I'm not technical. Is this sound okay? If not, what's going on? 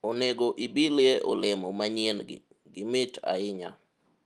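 Yes, no faults here.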